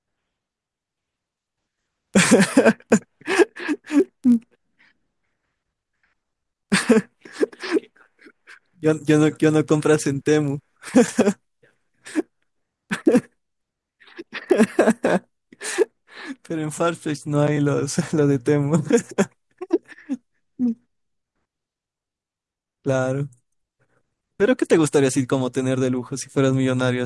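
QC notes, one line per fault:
0.0–16.78 s, resampler restarted on every block: the sample-rate conversion, which fits a change from 48 kHz down to 24 kHz, was run afresh on each 20 ms block, so the filter at each block edge lacked the real neighbouring samples and worked from silence or wrapped-around data instead. Each edge leaves a small discontinuity, and at 50 per second these merge into a steady 50 Hz buzz riding under the speech, present only while there is signal.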